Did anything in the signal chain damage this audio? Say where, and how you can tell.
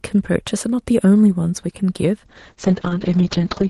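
Yes. A call bitrate drop in the network and codec stage begins at 2.26 s and lasts to the end. The speech turns rough and muffled, and the top end falls from 12 kHz to 8 kHz. This fits the encoder falling from about 32 kbps to 7 kbps.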